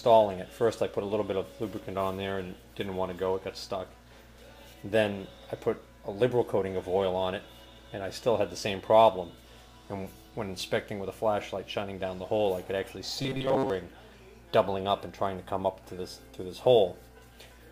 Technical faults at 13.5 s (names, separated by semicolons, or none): robotic sound from repeated short buffers